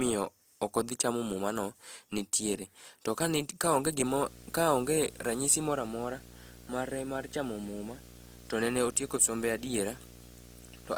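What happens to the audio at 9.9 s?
A video or display buzz runs from 4.05 s to the end. A screen or video cable couples into the audio, giving a 60 Hz buzz with hash above, roughly 20 dB below the speech. Opus compression roughness is also present throughout. The speech sounds grainy and rough, likely from Opus in its music mode at a low bitrate, around 24 kbps.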